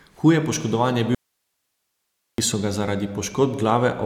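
Right after "poškodovan je", at 1.15 s, the speech cuts out abruptly for about 1.24 s, leaving only faint hiss far below the signal, before returning at 2.38 s on "so ga". That's an audio dropout to a faint residue, likely a lost signal feed with the downstream path still live.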